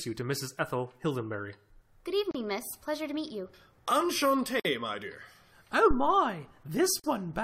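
Speech broken by brief dropouts at 2.31 s (34 ms), 4.60 s just before "my dear" (52 ms) and 7.00 s (43 ms). These are gaps at joins of encoded pieces, where untrimmed encoder delay and end padding leave silence. At 5.91 s a deep thump decays over about 73 ms, a phantom power thump from a supply switching on a live input.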